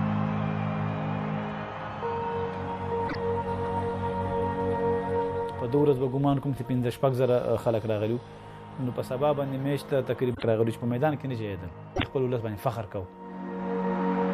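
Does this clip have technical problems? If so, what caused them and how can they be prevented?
Yes. Damaged data in a compressed stream causes three brief disruptions, at 3.05–3.15 s, 10.33–10.44 s and 11.93–12.03 s, each lasting about 0.11 s. At these points the stored or transmitted bytes were corrupted, so the decoder could not read those frames correctly, lost sync, and had to search for the next valid frame header before normal audio resumed. Transferring and storing the file with checksummed, error-checked transport, and validating it before playback, would prevent this.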